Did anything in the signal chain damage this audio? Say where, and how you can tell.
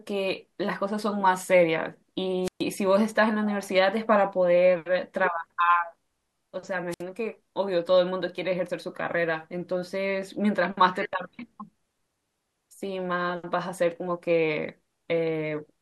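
Yes, there are two wireless microphone squelch dropouts, in the radio link before the converter, at 2.43–2.63 s and 6.90–7.02 s. Each starts with a short rise of hiss, then the output is muted for about 127 ms and 64 ms respectively before the speech resumes. The FM carrier faded until the receiver's squelch shut the audio off. On a spectrogram, a brief broadband noise smear precedes an almost empty column; the waveform shows a flat gap.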